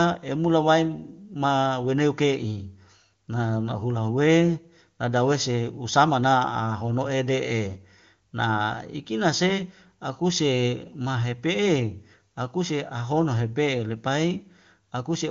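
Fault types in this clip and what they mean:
The speech is carried over an AMR wideband (HD Voice) path whose sound fits its highest rate of 23.85 kbit/s, with nothing above 7.2 kHz as that codec's bandwidth dictates, and no fault is present.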